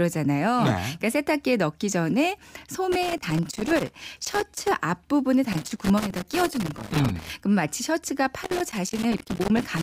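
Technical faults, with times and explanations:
2.92–4.71 s, 5.52–7.32 s and 8.44 s to the end: loose connector crackle, three irregular bursts of scratching as a worn contact rapidly makes and breaks, chopping the speech and popping on any DC; the waveform shows jagged dropouts and spikes, the spectrogram scattered full-band vertical streaks.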